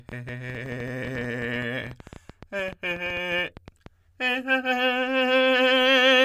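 A music clip with a train of clicks from 0.09 to 3.87 s: around forty irregular pops, about 11 per second, poking a few dB above the music, likely interference.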